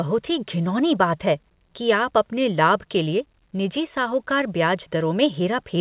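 Nothing stood out on listening to this speech, which comes through a telephone-style call path whose sound stops at about 4 kHz.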